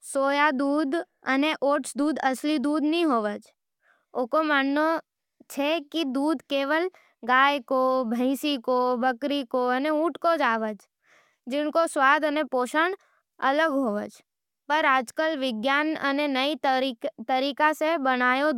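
Nothing in this speech recording points to a technical fault in the signal.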